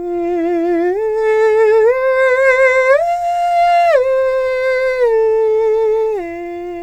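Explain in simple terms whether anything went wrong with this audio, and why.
Nothing went wrong with this piece of music, as no technical fault can be heard anywhere in it. There is no moment that stands out as damaged, so there are no times to point to.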